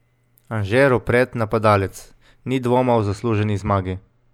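From 2.92 s to 4.34 s the speech turns dull, losing its top-end sparkle. This is channel delay (comb filtering). One channel lags the other by roughly two samples, so summing to mono cancels a notch around 10 kHz.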